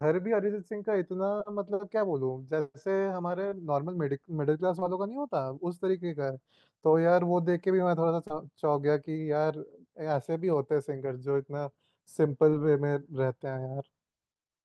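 Short concealed packet loss occurs at 1.37–1.41, 3.49–3.53, 4.79–4.83, 8.27–8.32 and 12.50–12.54 s. Each time, about 20 ms of the call audio arrived too late. The receiver patched the hole by extending the preceding sound and then blending back into the real signal. The result is a brief smear or wobble rather than a silent dropout or a sharp click. The sound passes through a WebRTC-style call path with Opus coding and a top end near 12 kHz.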